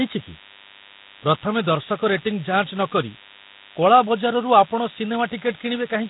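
A DECT cordless phone buzz runs through the whole recording. Radio bursts every 10 ms get rectified, giving a thin 100 Hz buzz roughly 20 dB under the speech.

From start to end, the speech sounds hissy, smeared and underwater, with nothing above 3.8 kHz. Heavy Nellymoser compression is the likely cause, consistent with about 16 kbps.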